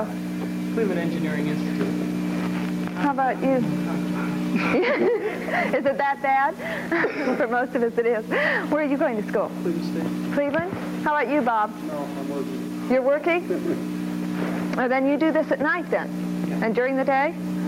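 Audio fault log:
Throughout: gain pumping. The overall level keeps moving up and down, with a swing of about 10 dB. Each loud sound pulls the level down, and it climbs back once that sound has passed. Loud and soft passages therefore sit closer together, and the sound comes across as squashed. The likely cause is an input gain set far too high for the microphone, with a fast limiter or compressor clamping down on every loud sound.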